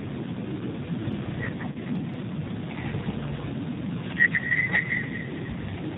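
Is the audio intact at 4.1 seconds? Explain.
No. Feedback echo between two devices runs from 3.46 s to the end: a second device replays the sound, which is picked up again, returning roughly every fifth of a second at up to about -4 dB, shown as repeated, smeared copies in the spectrogram. G.729 codec damage is also present, with nothing above 4 kHz, a rough, synthetic texture, and a spectrogram cut flat at 4 kHz, consistent with 8 kbit/s coding.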